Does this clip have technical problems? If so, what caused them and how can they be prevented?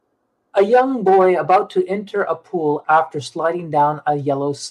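No, this clip has no technical problems, so there is nothing to prevent.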